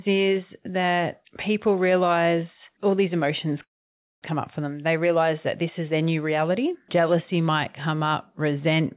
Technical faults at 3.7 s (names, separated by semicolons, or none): call audio freeze